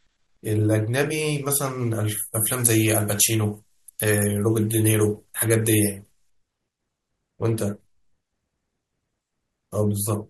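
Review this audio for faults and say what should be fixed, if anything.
From 2.34 s to 6.30 s the speech turns thin, bright and hissy, the mark of pre-emphasis left on. The treble boost applied before transmission was never undone by the matching de-emphasis, and the tilt follows a 75 µs FM curve that lifts 10 kHz about 13 dB above 1 kHz. On a spectrogram that span shows visibly heavier energy above a few kHz, with sibilants standing out as dense bright columns. The waveform looks spikier there. Fix it by applying the matching 75 µs de-emphasis wherever a pre-emphasised source enters the chain.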